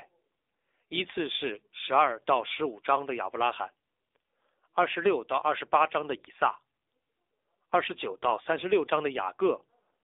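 Throughout, the speech has passed through the AMR narrowband mobile codec. The band runs only from 300 Hz to 3.7 kHz, and the voice is coded at a low rate, plainly buzzy and synthetic, which fits the 7.4 kbit/s AMR-NB mode.

From 8.30 to 8.33 s, lost AMR speech frames cause a brief dip or warble. The decoder patched a failed frame by repeating the previous pitch and vocal-tract settings at reduced gain. The gap of about 20 ms fits a single lost frame.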